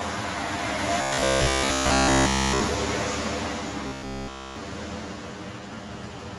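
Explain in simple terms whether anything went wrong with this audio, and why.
Several things went wrong. Throughout, there is channel delay (comb filtering): one channel runs about 10 ms late, so mixing them hollows the sound with fixed notches from roughly 50 Hz upward, unlike a moving phaser sweep.

The sound is dull, and tones carry a rough, fluttering haze. This is likely Dolby Digital compression, which is duller and grittier than simple muffling.

From 1.02 to 2.62 s and again from 3.87 to 4.56 s, the sound becomes a metallic 66.8 Hz buzz. This is robotic sound from repeated short buffers, likely caused by a roughly 15 ms slice looping instead of simply dropping out.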